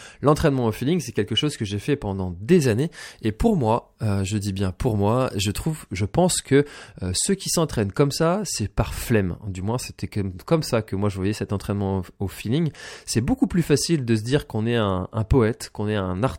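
From 2.62 to 5.67 s the speech turns thin, bright and hissy, with sibilants jumping forward. This is pre-emphasis left on: the treble lift of the CD 50/15 µs curve was never undone by its matching de-emphasis, leaving about 8 dB extra at 10 kHz relative to 1 kHz.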